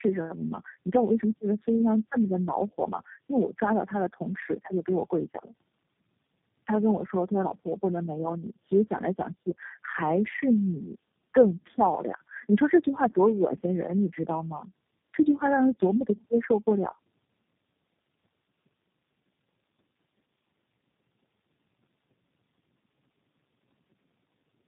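Tandem speech coding runs throughout. Repeated low-rate recoding stacks each codec's damage. The speech sounds rough, warbly and muffled, with nothing above 3.7 kHz.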